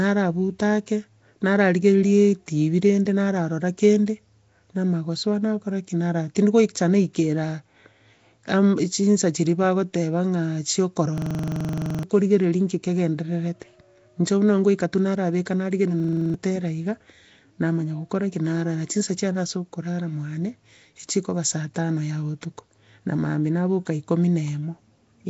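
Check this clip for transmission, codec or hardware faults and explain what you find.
Two faults are audible: codec damage across the whole speech clip, and two short episodes where the audio sticks in a repeating loop.

Nellymoser compression, throughout: the speech has a rough, hissy halo and a smeared, underwater quality, with nothing above 7.7 kHz. This likely comes from Nellymoser Asao coding, which fits a rate near 32 kbps. At that rate, bands with too few bits are filled with noise instead of signal.

System hang loop, at 11.18 to 12.03 s and at 16.00 to 16.34 s: a 42.67 ms slice repeats exactly, producing a rapid stutter at 23.4 Hz. It repeats 20 times in the first episode and 8 in the second. The playback hardware kept cycling a stalled ring buffer, which fits a 2048-sample buffer. About a second of audio is lost in the first episode and about a third of a second in the second.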